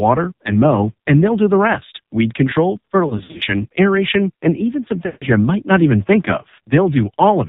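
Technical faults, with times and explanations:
Throughout: AMR narrowband mobile codec. Nothing above 4 kHz comes through, and the speech sounds buzzy and synthetic. The heavy damage fits one of the lowest modes, around 5.9 kbps, where a few pulses a frame can't hold much detail.
3.08 to 3.43 s: lost AMR speech frames. About 160 ms goes missing, scattered across roughly a third of a second, with the longest gap near 60 ms. The decoder holds the last pitch and fades it, so the speech warbles and dips.
5.06 to 5.25 s: lost AMR speech frames again. This is a tighter cluster of about 160 ms, so the concealed sound drags out and sags toward silence, then comes back thin and rough for a moment.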